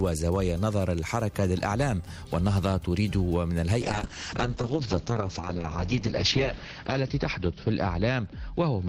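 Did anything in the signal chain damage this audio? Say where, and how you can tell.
Yes, the codec stage shows a call bitrate drop beginning at 3.82 s and lasting to the end of the clip. The sound turns coarse and watery, and the top end collapses. On a spectrogram, content reaching 20 kHz is cut off flat at 6 kHz, with smeared, blocky texture below it. The call's bandwidth estimate fell and the encoder was told to spend far fewer bits. The bottom stretch of about 2.9 s fits a rate near 7 kbps, down from about 96 kbps.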